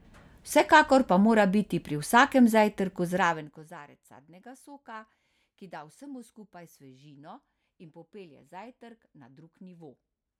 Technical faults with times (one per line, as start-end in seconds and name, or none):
3.06-3.84 zipper noise